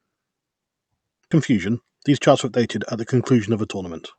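A speech recording carried over a call path in which a stretch of audio was dropped while newer audio was already queued. At 1.31 to 1.33 s playback skips ahead, losing around 0.4 s of speech. Nothing fills the hole, so the sound on either side is butted almost directly together, and the speech lurches forward abruptly instead of pausing. Shortly afterwards, from 1.53 to 2.29 s, the buffer was still holding more audio than its target, so the receiver applied a jitter buffer speed-up, repeatedly cutting out tiny pitch-period-sized slices to drain the backlog. Roughly 50 ms is removed in total, making that stretch run about 106% of normal speed at unchanged pitch, so it sounds slightly rushed. Throughout, the top end stops near 8 kHz with coding texture, consistent with Opus at around 64 kbps.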